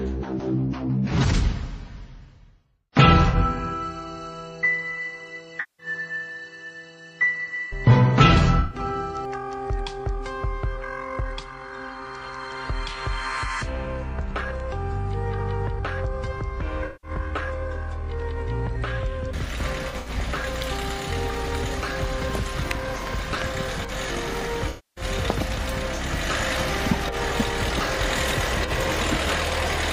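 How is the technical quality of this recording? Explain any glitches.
The recording has repeated dropouts from AAC frame loss with concealment at 3.29–3.35, 5.60–5.86, 8.60–8.79, 16.86–17.11, 19.89–20.10 and 24.69–25.04 s. Missing frames were patched from the last good spectrum, giving smeared, noisy gaps. The longer losses, up to 277 ms, sag toward silence. The one near 20 s breaks up in scattered patches, the longest about 70 ms.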